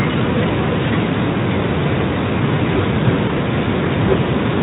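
Brief buzzy or noisy smears at 0.85 to 0.90 s and again at 3.27 to 3.30 s briefly weaken the speech. This is VoIP packet loss concealed by the speech codec: each gap fits one lost 20 ms frame, which the Speex decoder patched by extending its last pitch and filter.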